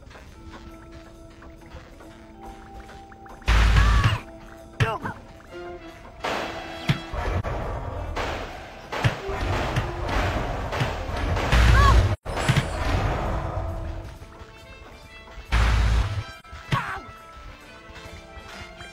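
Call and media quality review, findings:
AAC frame loss with muting at 7.39–7.45 s, 12.13–12.27 s and 16.39–16.46 s: brief dips at 7.39 and 16.39 (about 43 ms each), a longer soft-edged hole at 12.13 (about 128 ms, fits three consecutive frames). The decoder zeroed the missing spectra, and the window overlap fades the edges.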